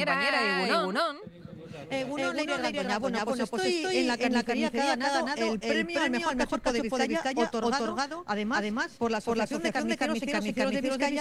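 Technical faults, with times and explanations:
Throughout: doubled audio track. The audio was most likely captured twice or held twice out of step, so a second full-band copy trails the original by about a third of a second at roughly equal level, with no decay or room colour on the repeat.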